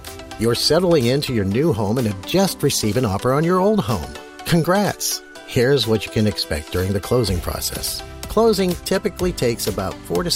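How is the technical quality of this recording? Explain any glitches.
No audible glitches or faults.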